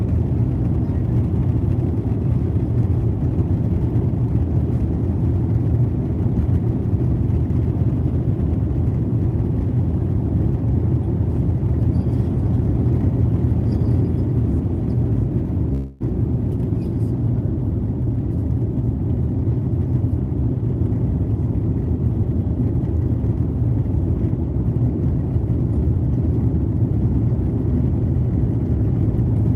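At 15.73 s the sound stops moving forward for about 0.29 s and is replaced by a fading buzz, the pattern of a call audio freeze. Delayed packets likely emptied the jitter buffer, so the receiver stretched out the last sound until data arrived, then resumed where it left off. About 270 ms is inserted and nothing is lost. On a spectrogram the last frame's harmonics smear horizontally and decay, and the waveform's envelope tapers before normal structure returns.

Two stretches of jitter buffer speed-up follow, as the receiver drains the excess delay. From 17.84 to 19.22 s the audio runs about 9% fast, and roughly 0.15 s is trimmed out. From 25.90 to 26.92 s it runs about 6% fast, losing something like 70 ms. Pitch stays put but the pacing feels hurried. On a spectrogram the events compress in time while harmonic spacing stays unchanged. The waveform shows repeated tiny splices where one or a few pitch periods were cut.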